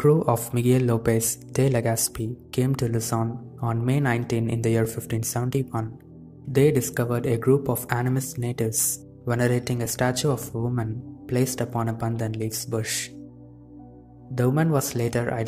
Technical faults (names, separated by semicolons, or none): overlapping chunks